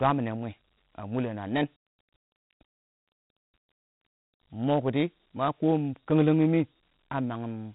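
From start to finish the speech carries Dialogic VOX ADPCM damage, plainly audible. Nothing sounds above about 3.8 kHz, and a gritty hiss rides on the speech itself. The encoder stores each sample as a 4-bit step from a predicted value, which fits 4-bit samples at 8,000 a second. A plain telephone band limit would sound dull but clean. This grit instead tracks loudness, because the coarse steps cannot follow fast changes.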